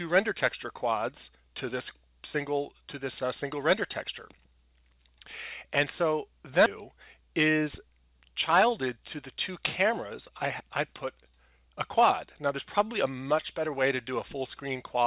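A skip ahead at 6.66 to 6.68 s: around 400 ms of sound was dropped, and playback jumps straight forward with no filled gap, joining both sides almost directly.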